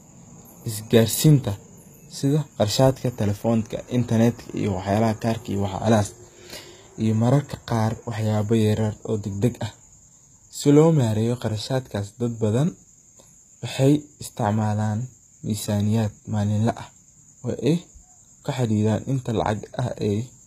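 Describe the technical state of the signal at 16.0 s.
Sibilants at 16.0 s, as throughout, sound gritty and metallic, with nothing above 14.9 kHz: likely HE-AAC compression copying lower bands upward into the treble.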